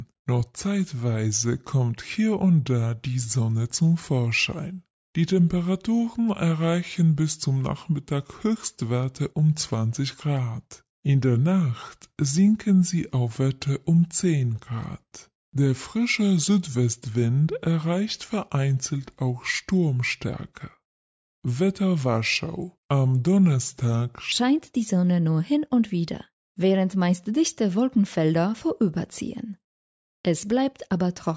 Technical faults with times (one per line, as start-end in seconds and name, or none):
0.00-24.32 wrong sample rate